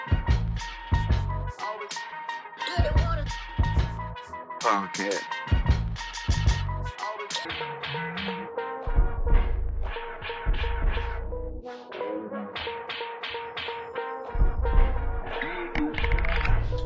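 Wrong sample rate from 7.45 s to the end: the audio drops to half speed and falls a full octave, 12 semitones, with tempo and pitch sinking together. The samples are clocked out at half the rate they were captured at, with no conversion, which fits 32 kHz material being played back at 16 kHz. Everything after that point sounds slow, heavy and low, stretched to twice its original duration.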